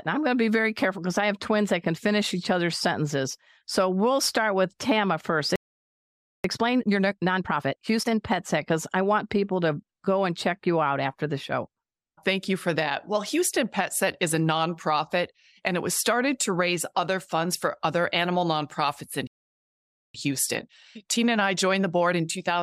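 A speech recording with two playback stalls. The audio goes silent from 5.56 to 6.44 s, and again from 19.27 to 20.14 s after "other animal nonprofits in". The likely cause is a starved buffer or blocked player thread. Time-compressed catch-up follows each stall, with speech hurried at unchanged pitch. It runs at 1.5 times speed from 6.44 to 8.20 s and 1.1 times from 20.14 s to the end.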